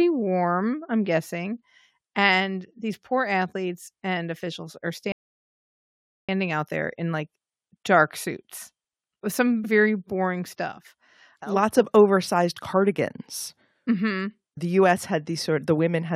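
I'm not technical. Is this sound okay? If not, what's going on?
No. At 5.12 s, after "athletes and officials are", a rebuffering stall inserts about 1.17 s of silence; playback then resumes intact at 6.29 s with "out there in like".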